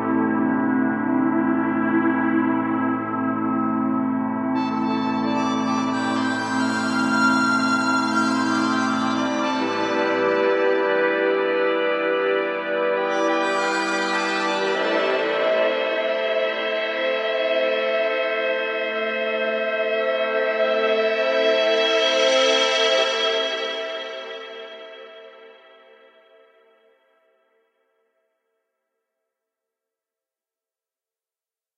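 The clip is a recording of sounds, and nothing is technically wrong with it.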